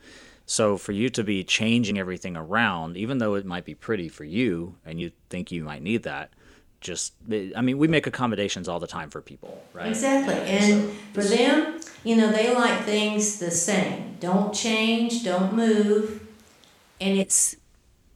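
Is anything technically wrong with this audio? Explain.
Yes, two kinds of fault. Compressed frames skipped at 1.9 s (after "for you to be"), 5.0 s (after "pretty for you and"), 11.77 s and 13.55 s: whole frames of about 26.1 ms go missing, jumping ahead roughly two, three, two and one frames.

From 9.46 s to 17.21 s the speech turns roomy and hollow, with thinner bass and room noise sitting about 35 dB under the voice. The level barely shifts, but the change in and out is abrupt, likely a switch to a distant microphone.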